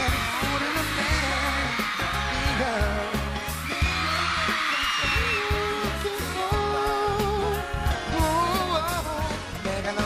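Sample clock jitter runs throughout: the converter's timing wanders by roughly a microsecond or two, so fast-changing waveform sections are misplaced. The result is a grainy hiss about 35 dB below the sound, unlike steady background noise because it swells with loud, bright passages and disappears in silence.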